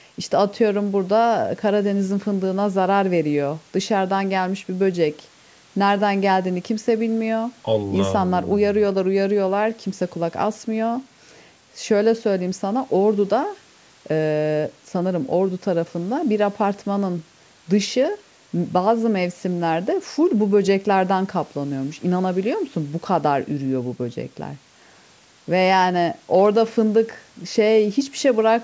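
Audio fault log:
No faults heard anywhere in this speech recording.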